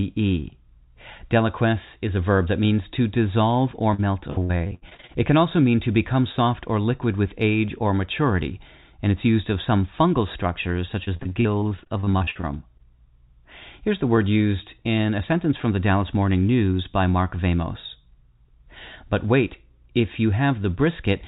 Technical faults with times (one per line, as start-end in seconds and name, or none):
3.94-5.17 repeated packet loss (robotic sound)
11.05-12.81 repeated packet loss (robotic sound)